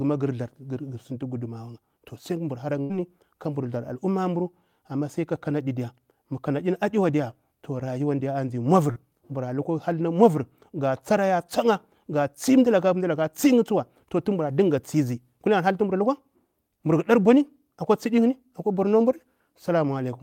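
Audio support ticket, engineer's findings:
Burst of packet loss, 2.81 to 2.92 s, before "kabur tsar": receiver concealment stretches the last sound about 80 ms, fading, then skips ahead. Spectrogram shows smeared, decaying band.

Short concealed packet loss, 8.92 to 8.98 s, before "mura lukwa": decoder fills about 40 ms by continuing the last sound, brief smear. Waveform shows a short, blurred joint.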